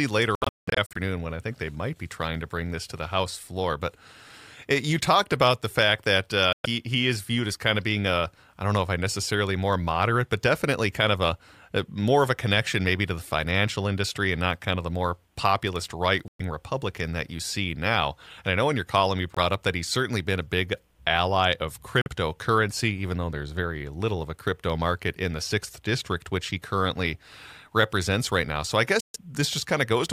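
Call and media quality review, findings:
Bluetooth dropout, likely packets arriving late and being discarded on the link to the headphones. Sound cuts abruptly to silence, then resumes further on as if it had played through. Affected spans: 0.35–0.97 s (scattered gaps, longest about 0.19 s), 6.53–6.66 s, 16.28–16.41 s, 19.34–19.38 s, 22.01–22.08 s and 29.00–29.17 s.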